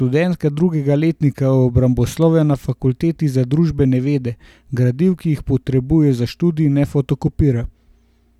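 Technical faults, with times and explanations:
Nothing here stands out as a technical fault; the speech comes through steady from beginning to end with nothing catching the ear.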